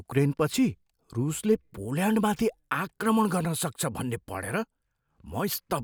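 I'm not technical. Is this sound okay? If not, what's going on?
Yes, nothing wrong can be heard in this recording.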